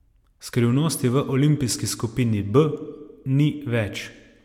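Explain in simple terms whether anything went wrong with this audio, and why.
Nothing went wrong with the recording: the speech comes across steady and intact, with no technical fault anywhere in it.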